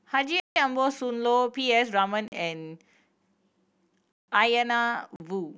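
Blocks of digital silence interrupt the speech at 0.40 to 0.56 s, 2.28 to 2.32 s, 4.12 to 4.28 s and 5.16 to 5.20 s: samples are replaced by zeros without fading. The 160 ms gaps sound as holes and the 40 ms ones as shorter holes.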